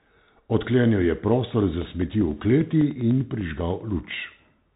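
From the start the speech carries Bluetooth CVSD headset codec damage, plainly audible. The one-bit delta modulation, consistent with a 64 kbps CVSD link, removes everything above 4 kHz, scratches the s sounds, smears loud high energy where the step size cannot keep up, and leaves a granular hiss underneath.

From 1.62 s to 4.70 s, periodic USB or driver dropouts appear every 0.0995 s, around thirty in all. Each skips roughly half a millisecond of audio outright, with no silence inserted, so the speech ticks at a steady ten-per-second rate wherever signal is present.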